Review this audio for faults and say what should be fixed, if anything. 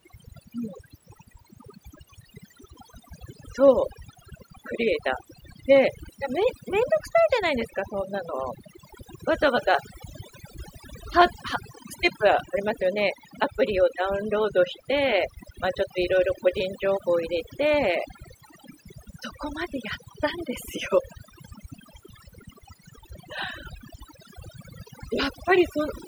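Overdone noise removal runs through the whole clip. The reduction is set so hard that bands near the noise floor get pulled down or gated out, and the quieter parts of the speech go with them. That leaves near-silent gaps with twinkly specks. Next time, back the reduction amount off and let a little natural room noise stay in.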